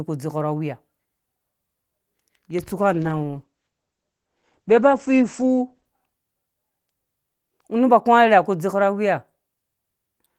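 From 2.94 to 5.93 s, a call bitrate drop makes the speech rough and muffled. Coarser coding and a top end cut from 20 kHz to 8 kHz fit the encoder falling from about 32 to 12 kbps for roughly 2.9 s before recovering.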